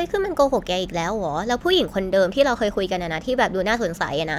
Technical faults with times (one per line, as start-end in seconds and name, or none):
none